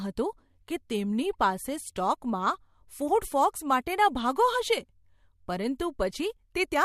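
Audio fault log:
Nothing stood out on listening to this speech recording.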